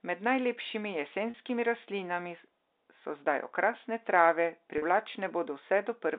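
Packet loss with pitch repetition occurs at 1.30 s and again at 4.78 s in this telephone-band speech. Each time about 40 ms of audio goes missing, which fits two 20 ms packets, and the receiver bridges the hole by replaying the last pitch period. The speech briefly takes on a held, buzzy quality before normal audio resumes. The G.711 line band of 300 to 3700 Hz is audible throughout.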